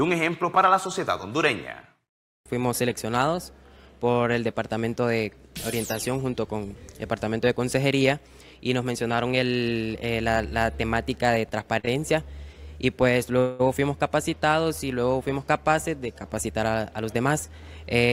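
The audio briefly holds with a slight buzz or dip at 11.79 to 11.85 s and again at 11.85 to 11.89 s, stretched by 39 ms and 16 ms: short stalls from a late packet emptying the jitter buffer, with the last sound extended until the data arrived. At 13.39 to 13.61 s the sound freezes into a fading buzz or hiss for about 205 ms before resuming from where it stopped, a call audio freeze, likely from packets held up in transit that drained the buffer. From 16.47 to 17.30 s the audio runs hurried at about 107% speed with unchanged pitch, a jitter buffer speed-up that trimmed roughly 70 ms in small pitch-period pieces to cut the accumulated delay.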